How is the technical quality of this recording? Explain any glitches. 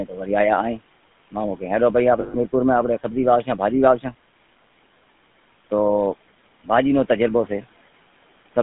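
The recording is narrowband phone speech with three faults: codec roughness throughout, a muffled start, and a short dropout near 2.2 s. Room noise sits about 21 dB below the speech.

The GSM full-rate codec shapes the whole clip. The band runs from 150 Hz to 3.5 kHz, so the top end is gone. This codec models the throat and mouth as a filter, then drives it with a sparse train of pulses. It keeps only part of the excitation detail, which fits a 13 kbps rate. The result is a plainly audible buzzy, gravelly grain on every syllable.

From 0.05 to 0.28 s, the opening is speech cut by the noise suppressor. The suppressor mistook the start of the speech for background noise. It turned that sound down along with the room noise, by about 13 dB at the deepest point. Roughly 150 ms is affected in all. The onset sounds swallowed and faint, as if it begins partway in.

From 2.20 to 2.35 s, just after "مامو کہے ہلو", there are lost GSM frames. 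About 140 ms of audio did not arrive, which points to seven frames. The decoder filled the gap by repeating the settings of the last good frame. What you hear is a brief rough, metallic ring before the speech returns.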